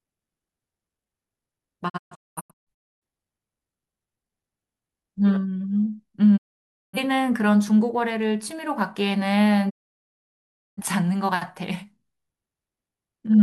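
Digital broadcast dropouts break the speech three times as the receiver loses valid frames and mutes. From 1.88 to 3.03 s the sound drops out in several short holes, the longest 0.26 s. It goes fully silent from 6.36 to 6.99 s and again from 9.69 to 10.83 s. Each mute fades in about 20 ms, and the speech sent during these gaps is lost.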